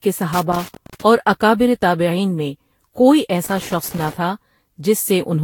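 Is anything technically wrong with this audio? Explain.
Yes. Two faults can be heard in this speech clip.

Generation loss runs through the whole clip. The sound is swirly and hollow, with a smeared texture and soft, blurred consonant attacks. Content stops at about 19.3 kHz. The damage is worse than a single encode near 70 kbit/s would give. The likely cause is repeated lossy re-encoding, around seven passes, pointing to Vorbis. Each pass quantised again on a shifted frame grid. Noise and spectral holes built up with every generation.

Loose connector crackle appears twice, from 0.33 to 1.02 s and from 3.45 to 4.13 s. The second burst comes right after "تابعین میں کوئی". Each lasts about 0.7 s. It is an irregular scratchy crackle over the sound. A worn or dirty contact was making and breaking rapidly. That chopped the signal into fragments.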